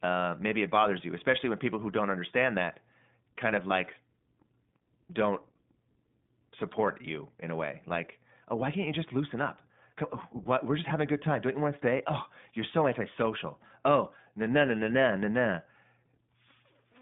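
Throughout, the speech carries iLBC codec coloration: band-limited to roughly 150 Hz to 3.6 kHz, with a slightly rough, synthetic edge from the excitation coding. Each 20 ms frame is coded independently, and the plainly audible damage fits the 15.2 kbps mode.

From 3.69 to 3.71 s, just after "understand that kind of", one 20 ms frame is lost. The iLBC decoder covers the gap by repeating the last pitch cycle mixed with noise, heard as a brief held, buzzy vowel, and the speech recovers immediately afterwards.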